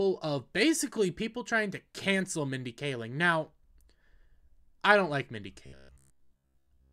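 The last part of the clip has robotic sound from repeated short buffers. It runs from 5.66 s to 6.92 s, to the very end. The audio turns into a rigid, metallic buzz pitched at 66.8 Hz. That pitch matches a repeated slice about 15 ms long. Most of that stretch is filled by repeats rather than new audio. The likely cause is audio arriving too slowly, so playback loops the last short buffer while real audio is skipped.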